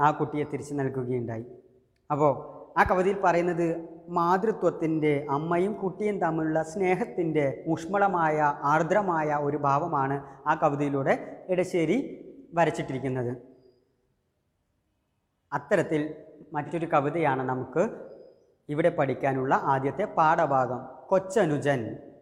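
An AAC frame dropped out of the stream at 16.65 s to 16.72 s, a gap of about 43 ms that fits a single lost frame, and the decoder concealed it by reusing the previous spectrum. The result is a brief smeared, noisy or phasey patch in the sound.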